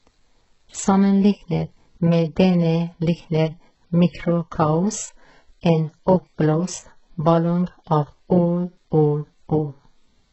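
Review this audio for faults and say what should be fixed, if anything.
Throughout the speech, the s sounds come out gritty and lispy, the upper range has a synthetic, metallic sheen, and nothing remains above 8 kHz. This is likely HE-AAC compression with heavy damage, at a rate that fits about 8 kbps. The codec keeps only the lower band and fills the treble by copying lower bands upward under a coarse envelope, so the harmonics don't line up. A plain low-pass would sound dull, whereas here the treble is bright but false. Encode at a higher bitrate, or with a codec mode that codes the full band directly.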